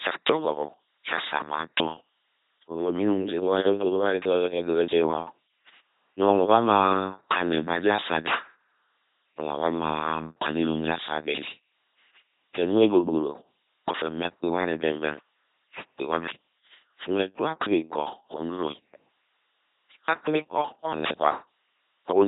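An LPC-10 vocoder runs throughout this speech clip, its heavy coding damage fitting a 2.4 kbit/s rate. Each moment is rebuilt as either pulse-driven buzz or noise through a ten-pole filter, giving a mechanical robotic voice, with nothing above 3.9 kHz.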